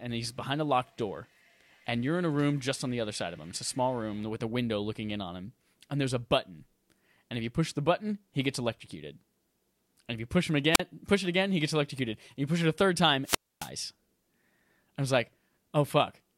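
At 10.72 s the speech breaks into a short burst of hiss, then goes almost silent for about 40 ms before returning by 10.81 s. A longer hole follows from 13.24 to 13.70 s, with about 270 ms of near silence. Both are wireless microphone squelch dropouts: the analogue FM radio link faded, noise rose as the signal weakened, and the receiver's squelch muted the output until the signal recovered.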